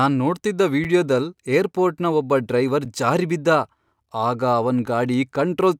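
Three gaps between chunks cut into the speech, at 0.84 s, 2.85 s after "ಏರ್ಪೋರ್ಟ್ನ ಒಬ್ಬ ಡ್ರೈವರ್" and before "ಜಾರಿ ಬಿದ್ದ", and 4.86 s after "ಆಗ ಅವನ್". Each is a 6.5 ms hole. They recur every 2.0 s, where chunks were joined with silence between them.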